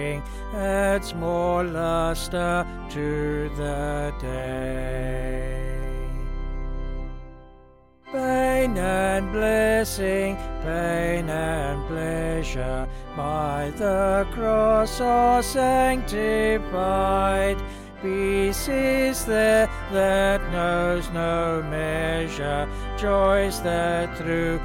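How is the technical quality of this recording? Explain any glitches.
No technical glitches can be heard anywhere in the recording.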